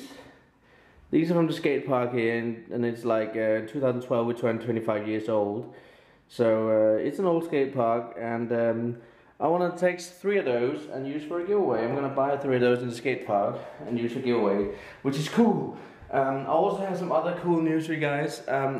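Nothing here calls for comment, since no technical faults turn up anywhere in the clip.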